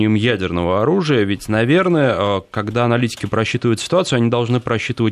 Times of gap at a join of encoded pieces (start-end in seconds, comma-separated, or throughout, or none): none